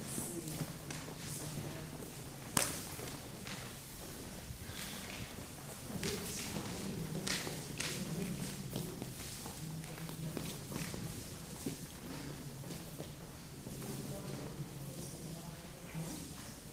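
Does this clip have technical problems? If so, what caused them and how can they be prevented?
No, the audio shows no technical faults, and the signal stays steady and intact throughout.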